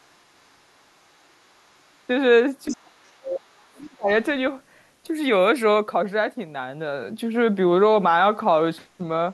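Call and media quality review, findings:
Echo canceller left residual far-end signal in the mic path: other side's voice leaking through, likely from loudspeaker pickup. Faint, around 40 dB below the talker, at 0.00–0.16 s, 0.37–0.57 s, 0.77–2.02 s and 3.61–3.68 s. A stronger burst at 2.68–2.77 s, only about 15 dB under the talker. The leakage is heard as a second voice behind the near-end speech.

Double-talk detection failed during overlap from 2.68 to 4.09 s: speech suppressed in double talk, likely the canceller treating the near-end talker as echo and attenuating everything. The talker's level dips by as much as about 30 dB, roughly a second of speech in total affected, heard as ducked speech while the far end talks.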